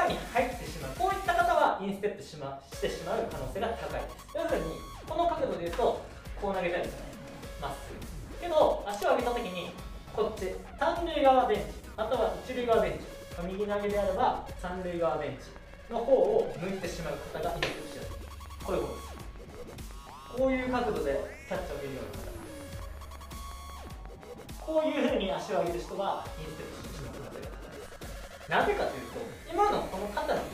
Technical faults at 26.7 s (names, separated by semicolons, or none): train of clicks